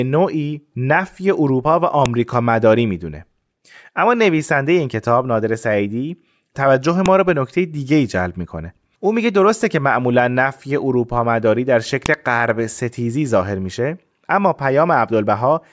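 Sharp snaps at 2.06, 7.06 and 12.06 s, every 5 s, are a file header played as audio: the leftover header bytes of each joined speech piece are reproduced as samples.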